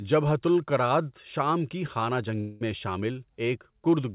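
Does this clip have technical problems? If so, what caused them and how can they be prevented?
Yes. From 2.4 to 2.63 s the speech gives way to a smeared, buzzy continuation of the last sound that fades over about 0.2 s, and then the speech resumes with a piece missing, with no silent gap left behind. That is a long network dropout, likely caused by packets failing to arrive for roughly 200 ms. The receiver covered the hole by extending what it last had, so the lost stretch was never played. The call path itself, band-limited with nothing above 4 kHz in a way that fits G.711 A-law, carries the concealed sound. Prevent it by using a stable wired connection, reducing competing upload traffic, or sending redundant audio or forward error correction so lost packets can be rebuilt.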